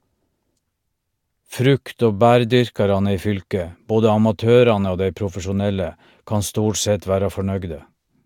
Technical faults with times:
none

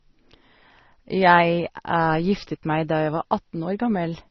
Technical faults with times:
0.00-4.30 transcoding between lossy codecs

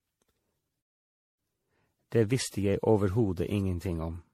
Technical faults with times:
0.00-4.34 generation loss
0.81-1.39 playback stall

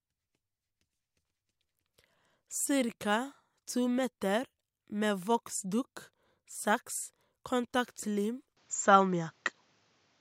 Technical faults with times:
8.57-10.20 input switched to a poorer device

